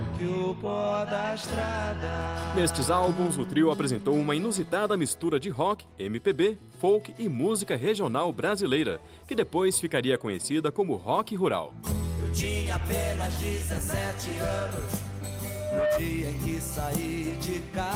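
From 15.43 s to 16.03 s there is a loudspeaker feedback squeal: a single tone near 606 Hz swells out of the sound over just under half a second and rises to a few decibels above everything else before it stops. A microphone was picking up its own loudspeaker, and at that frequency the loop gain went past one, so the tone kept feeding itself. That self-sustaining growth separates it from a steady whistle or hum, which would sit at a constant level from the start.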